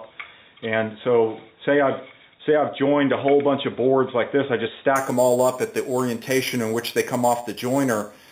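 From 4.96 s to the end at 8.32 s, the audio shows imaging from sample-and-hold upsampling. The rate was raised from 8 kHz to 44.1 kHz by holding each sample with no smoothing filter, so mirrored copies of the spectrum fold up around multiples of 8 kHz. The first image fills the 4 to 8 kHz band at about 16 dB below the signal, heard as a bright metallic fizz that rises and falls with the sound.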